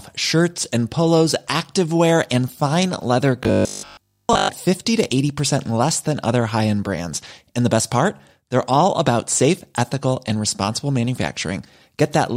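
From 3.43 to 4.51 s, right after "activewear and fine leather", the speech turns into a rigid, metallic buzz at 50 Hz that still loosely tracks the words. This is robotic sound from repeated short buffers, likely caused by audio arriving too slowly, so a 20 ms chunk is replayed over and over while most of the real audio in that stretch is lost. The waveform shows near-identical cycles every 20 ms, and the spectrogram shows a comb of evenly spaced horizontal lines at 50 Hz.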